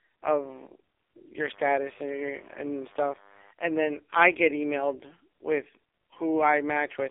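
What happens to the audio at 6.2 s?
AMR narrowband mobile codec damage is present at 6.2 s, as it is throughout. The speech is squeezed into a telephone band of about 300 Hz to 3.6 kHz with nothing above 3.7 kHz, and heavy low-bitrate vocal-tract modelling, consistent with roughly 5.9 kbps, makes it buzzy and synthetic.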